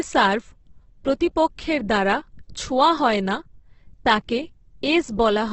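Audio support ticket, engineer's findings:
Opus compression, whole clip: speech grainy, rough and noisy in place of clean tonal detail. Spectrogram shows a hard ceiling near 8.2 kHz and bands filled with noisy texture, few holes. Heavy damage, likely low-rate Opus CELT mode, fitting about 12 kbps.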